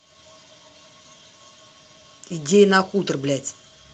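No technical faults are audible.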